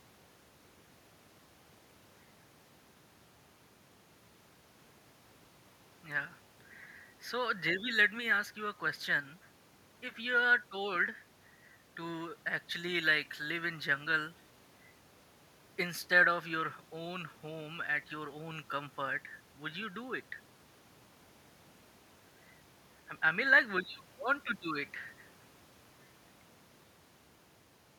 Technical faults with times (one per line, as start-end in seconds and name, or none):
none